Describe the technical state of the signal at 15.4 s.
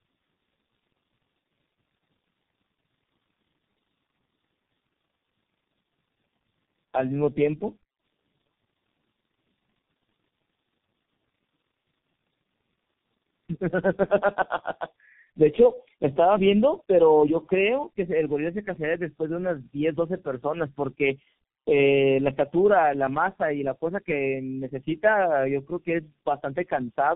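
At 15.4 s the speech carries tandem speech coding, as it does for the whole clip. The signal passed through three low-rate speech codecs in a row, with 64 kbit/s G.711 hops between them. That fits AMR-NB at 7.95 and 6.7 kbit/s followed by G.723.1 at 6.3 kbit/s. Each coder re-encoded the previous one's damage. The result sounds rough, muffled and warbly, with nothing above 3.5 kHz.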